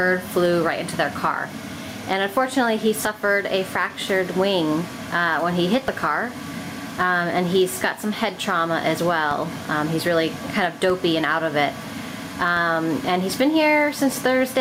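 Throughout, the level ducks by roughly 10 dB under each loud sound: gain pumping, likely from gain set too high with a fast limiter clamping down. At 5.88, 9.31, 10.90 and 12.57 s, low thumps break in while the sound carries on: DC steps, each jump in the zero line easing back as a 2 Hz high-pass drains it.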